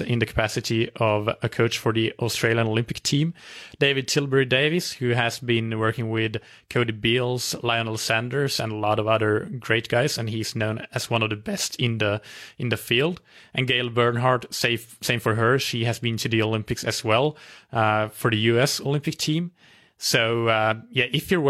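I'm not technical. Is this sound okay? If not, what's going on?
Yes, this recording sounds fine, with nothing going wrong that a listener would notice. The speech comes through steadily, with no dropouts, jumps or odd noises anywhere along the way.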